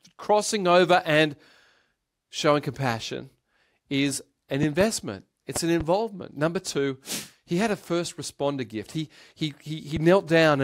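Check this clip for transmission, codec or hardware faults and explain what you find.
The speech carries three loud pop events. Just after "showing compassion is an", a double pop occurs at 4.63–4.83 s, and another double pop follows at 5.56–5.83 s. Each peaks about 10 dB above the speech. A single, weaker pop at about 5 dB comes at 9.96–9.99 s. The likely cause is a voltage step or pulse, from a switch, plug, static or driver glitch, added to the signal and shaped by later circuitry. The pops are heard as sharp thumps over continuing speech. On a waveform they appear as tall spikes. A spectrogram shows them as full-band vertical lines.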